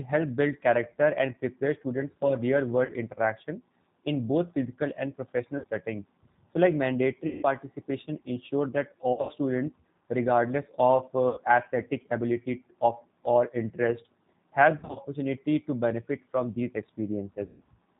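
The speech runs through the G.729 codec at 8 kbit/s throughout. Each 10 ms frame is rebuilt from a vocal tract filter, a pitch predictor and a few pulses. Nothing above 4 kHz survives. The result is plainly rough and synthetic, with a dull, band-limited tone.

VoIP packet loss concealed by the speech codec breaks in seven times. The gaps are at 2.85 to 2.94 s (40 ms lost), 5.58 to 5.66 s (60 ms), 7.27 to 7.45 s (160 ms), 9.13 to 9.32 s (140 ms scattered over 160 ms), 11.29 to 11.40 s (80 ms), 14.79 to 14.98 s (120 ms scattered over 160 ms) and 17.46 to 17.62 s (140 ms). The gap sizes fit 20 ms packets. In each gap the decoder stretches its last pitch and filter into a buzzy tone or coloured noise that fades. The longer gaps at 7.27 s and 17.46 s fade furthest. The voice stays weak and distorted briefly after each gap.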